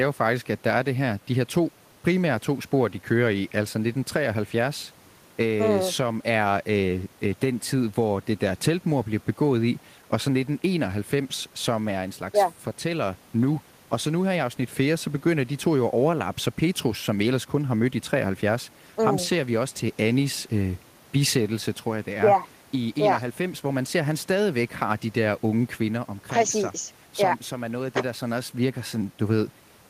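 Nothing here stands out as a technical fault; the speech runs along from the first moment to the last without anything going wrong that a listener would catch.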